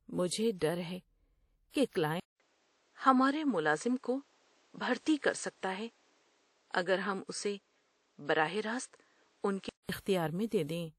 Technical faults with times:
0.00-10.98 WMA compression
2.20-9.89 input switched to a poorer device

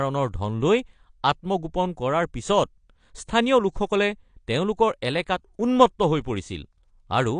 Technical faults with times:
0.00-7.39 AAC compression

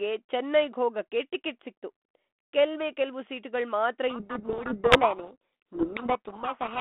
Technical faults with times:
4.10-6.80 codec payload misread

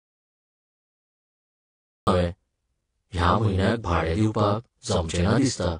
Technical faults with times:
0.00-5.80 channel delay (doubling)
0.00-5.80 transcoding between lossy codecs
0.00-2.07 audio dropout to silence

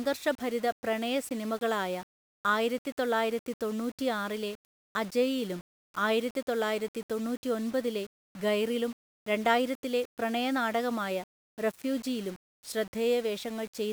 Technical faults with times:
none

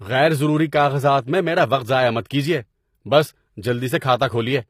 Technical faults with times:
0.00-4.70 HE-AAC compression
3.99-4.02 pre-echo

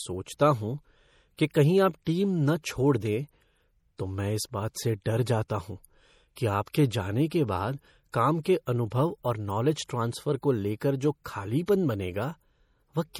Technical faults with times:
0.00-13.19 MP3 compression
1.54 pre-echo
6.36 pre-echo
6.72-6.74 pre-echo
8.12 pre-echo
8.43-8.45 pre-echo
11.66 pre-echo

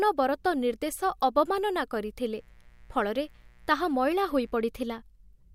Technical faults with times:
2.35-4.54 mains buzz

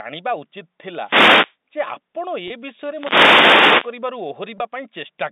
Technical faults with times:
1.01-1.56 wireless microphone noise hit
2.48-2.50 packet loss with pitch repetition
2.87-4.00 wireless microphone noise hit
4.58 packet loss with pitch repetition

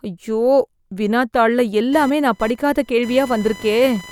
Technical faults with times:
1.93-4.11 computer activity noise

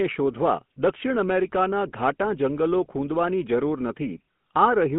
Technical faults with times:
0.00-4.99 GSM full-rate codec

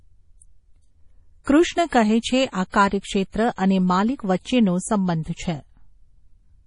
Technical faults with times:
0.00-6.66 MP3 compression
1.44-1.47 pre-echo
1.89-1.92 pre-echo
2.69-2.74 pre-echo
3.55-3.58 pre-echo
4.42-4.45 pre-echo

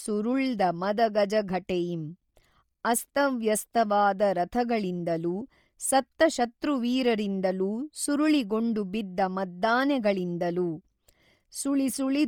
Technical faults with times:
0.00-12.27 Bluetooth LC3 compression

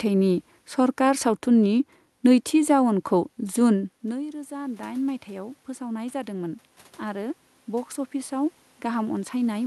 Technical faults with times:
4.02-9.66 automatic gain rising

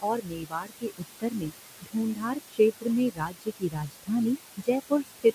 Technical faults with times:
0.00-5.34 noise suppressor artifacts
0.02-1.52 speech cut by the noise suppressor
1.81-2.59 speech cut by the noise suppressor
3.09-4.27 speech cut by the noise suppressor
4.57-5.25 speech cut by the noise suppressor

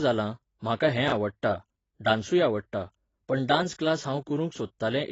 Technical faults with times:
0.00-5.12 AAC compression
1.08-1.12 chunks out of order

